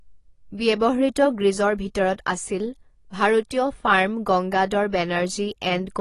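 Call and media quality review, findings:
AAC compression, throughout the clip. Nothing above 12 kHz. Speech dull and smeared, sibilants fizzy, codec damage plainly audible. Likely a bit-starved AAC-LC encoder, consistent with about 32 kbps: the encoder lowers the cut-off and coarse quantisation leaves spectral holes.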